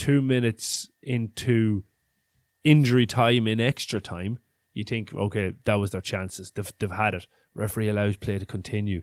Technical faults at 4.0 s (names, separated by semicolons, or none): lost packet rebuilt from error correction